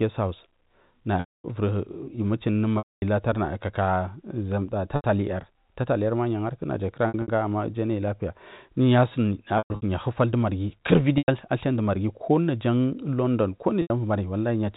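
Packet loss with pitch repetition hits at 1.2 s, 2.78 s, 4.96 s, 7.08 s, 9.58 s, 11.18 s and 13.82 s. Gaps of 80 to 240 ms were patched by looping the last pitch period, giving a held, buzzy tone that fades out on the longer drops before the speech cross-fades back in.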